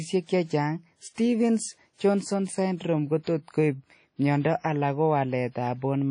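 Throughout the speech, the sound is washy and ringing, with a hiss that swells and fades along with the signal and nothing above 10.1 kHz. This is likely WMA compression at a low bitrate, which fits roughly 32 kbps: long transform blocks smear quantisation noise and drop weak components.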